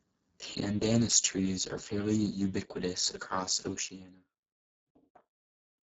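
From start to end, the speech carries heavy Speex codec damage. It sounds hoarse, noisy and close to robotic, which points to a very low bitrate of around 6 kbps. With so few bits, the excitation is crude. Nothing is present above 7.7 kHz.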